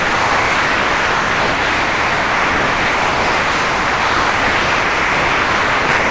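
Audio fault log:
0.00–5.89 s and 5.98–6.11 s, sound dropped by the voice detector: nearly the whole clip is a steady, featureless hiss. Real sound breaks through only for about 0.1 s between 5.89 and 5.98 s before the hiss returns until the end. The likely cause is the sender's detector treating the sound as background and stopping transmission while the receiver filled in comfort noise. Packet loss would instead leave short clicks or smeared repeats, not long, even noise. Like the brief real sound, the noise stops at 8 kHz, which fits a G.722 call path.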